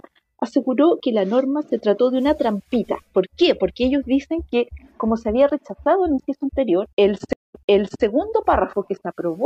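At 7.33 s a stream reconnect begins: the connection dropped, playback fell silent for 208 ms, and a fresh decoder then picked up mid-stream, with the event ending at 8.03 s. The audio resumes about 496 ms earlier than where it broke off, so that stretch is heard twice. On a waveform this appears as a flat gap followed by a fade-in of the first frame. A spectrogram shows a blank vertical band, then repeated material.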